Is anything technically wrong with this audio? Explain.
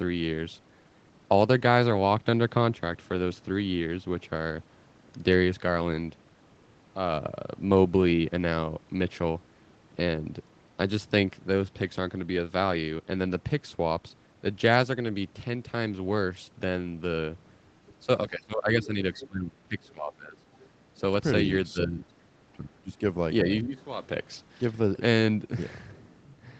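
Yes. In the speech between 18.05 and 23.71 s, the talker's level drops and short scraps of another voice come through.

Speech suppressed in double talk occurs at 18.05–20.45, 20.98–21.02, 21.72–23.0 and 23.44–23.71 s. The echo canceller likely mistook overlapping talk for echo and attenuated everything. The dips reach about 20, 5, 25 and 10 dB. On the waveform they look like sudden collapses in the envelope, and on the spectrogram the harmonics fade or break into gaps.

The other side's voice leaks through at 19.19–19.27 and 20.61–20.67 s. These are likely residual loudspeaker echo that the canceller failed to remove. The scraps are brief and faint, about 20 dB and 30 dB below the speech. On the spectrogram they show as faint harmonic fragments.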